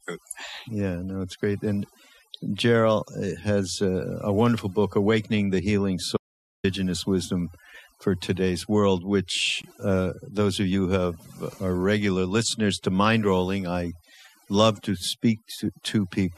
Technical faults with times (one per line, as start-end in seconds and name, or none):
0.00-16.38 overdone noise removal
6.17-6.64 audio dropout to silence
9.62 gap at a join of encoded pieces